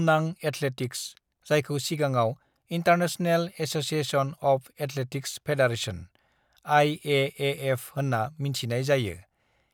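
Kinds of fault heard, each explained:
Nothing stood out on listening to the speech.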